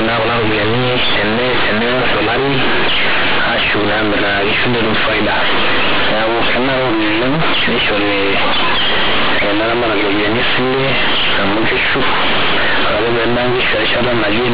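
From start to finish, mu-law telephone bytes are being handed to the output as if they were plain linear 8-bit samples, so the companded audio is read as linear and never expanded. Because mu-law code values sit near the top and bottom of the range for quiet samples, every sign change throws the waveform across roughly half its span. The speech comes out harsh, overdriven and buzzy, with loud hiss filling the pauses, all riding on the narrow 4 kHz telephone band.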